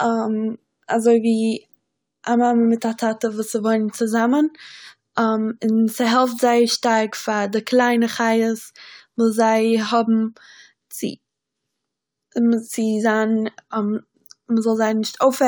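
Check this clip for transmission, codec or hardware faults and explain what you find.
Nothing turned up on a careful listen, so there's no fault to report anywhere in this speech recording.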